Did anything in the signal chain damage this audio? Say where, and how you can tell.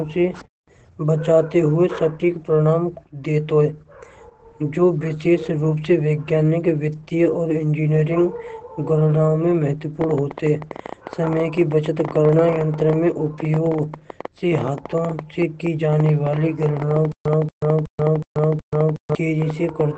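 Yes, Opus voice compression at the codec stage throughout: speech sounds muffled and slightly robotic, consistent with roughly 12 kbps SILK, and a spectrogram shows a hard ceiling near 8.6 kHz.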